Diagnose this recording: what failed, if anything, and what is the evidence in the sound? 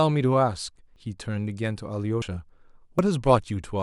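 The speech skips ahead at 0.96 s, 2.22 s and 2.99 s. No silence fills the jumps. Roughly 40 ms is lost at the first, about 70 ms at the others. The likely cause is a dropped buffer (overrun) at the driver stage: samples were overwritten before being read.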